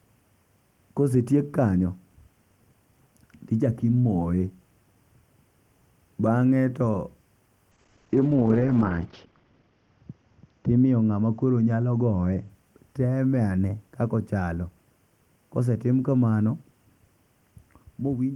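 From 7.72 to 12.55 s there's a call bitrate drop: the encoder slides from 32 to 10 kbps, bandwidth narrows from 20 kHz to 8 kHz, and the speech turns muffled and rough.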